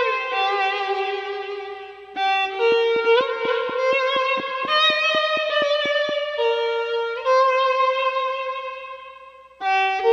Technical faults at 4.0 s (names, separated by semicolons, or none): train of clicks